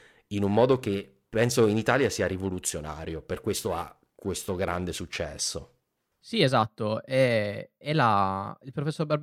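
A speech recording with periodic clock jitter from 0.38 to 5.25 s. The converter's sample clock wobbles at around 1 kHz, placing sidebands that far either side of every component, strongest on higher frequencies. This gives the sound a rough, metallic edge that disappears in pauses.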